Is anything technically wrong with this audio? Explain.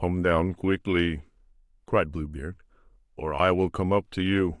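No, nothing technically wrong turns up here; it's just speech with no faults to point out.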